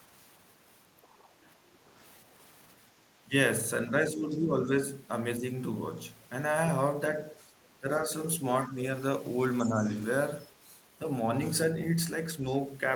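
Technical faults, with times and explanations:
0.97–1.02 s, 3.22–4.77 s and 7.4–9.85 s: speech suppressed in double talk. The speech sags in level in brief gaps and pieces. The first dip is very short, the second runs through most of a second, and the third adds up to about half a second, scattered across its span. It drops by about 10 dB in the first two and about 5 dB in the last. The likely cause is an echo canceller that could not tell the local talker from loudspeaker echo while both sides spoke, so it turned both down.
1.02–1.49 s, 4.3–4.36 s and 9.64–9.68 s: other side's voice leaking through. A faint second voice sits under the speech. First it is a low trace for almost half a second, about 35 dB down. Then come two short scraps that are louder, about 25 dB and then about 20 dB below the speech. The far end was playing on a loudspeaker, and the echo canceller likely left some of it in the microphone signal.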